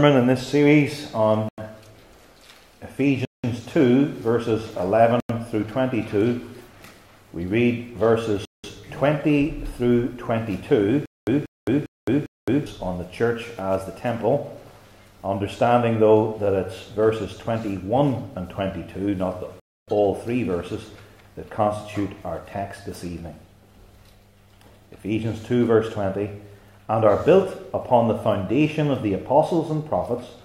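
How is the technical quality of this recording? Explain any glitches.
The recording is marred by repeated dropouts and one stretch of stuttering.

Blocks of digital silence occur at 1.49–1.58 s, 3.25–3.44 s, 5.20–5.29 s, 8.45–8.64 s and 19.60–19.88 s, lasting about 93 ms, 186 ms, 93 ms, 186 ms and 279 ms. Each time the output buffer was likely not filled in time, so zeros went out instead. The sound switches off and on abruptly. The 93 and 186 ms lengths fit whole buffers of 4096 and 8192 samples. Unlike a stutter, nothing repeats. The audio simply vanishes once.

A stutter with silent gaps runs from 11.06 to 12.66 s. A burst of about 187 ms plays, then about 215 ms of dead silence follows, and the cycle repeats every 402 ms, four times in all. This is likely a stalled player or stream replaying its last fragment at each retry before running dry. What sets it apart from the silent blocks is the identical fragment returning at a steady pace. 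The material that should have filled that stretch is lost.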